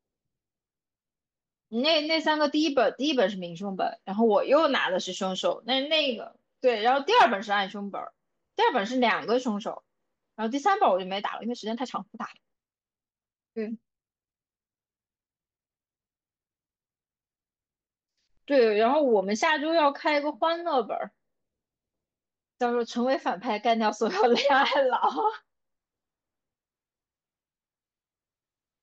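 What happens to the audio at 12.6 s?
A time-stretched section runs from 11.19 to 14.39 s, with the speech playing about 1.67 times faster while keeping its pitch. This is likely from software squeezing the passage to fit a length by dropping short pieces, which makes the pace jump abruptly and sound rushed.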